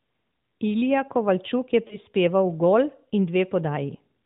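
At 1.88 to 1.98 s there are lost AMR speech frames. The decoder received a corrupted frame, so it repeated the previous pitch and vocal tract settings at reduced gain. The result is a brief warbling dip that points to a single lost 20 ms frame, and the speech returns weak or rough for a moment before steadying. The AMR narrowband coding around it keeps its 4 kHz ceiling.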